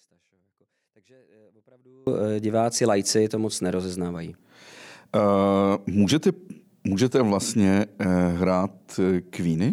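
An audio dropout to a faint residue runs from the very start of the clip to 2.07 s. The speech is already missing when playback begins, and only a faint sound remains, roughly 35 dB below the normal signal level. At 2.07 s the full signal returns abruptly, with no fade. The likely cause is a break in the wanted signal path while the stage after it stayed live.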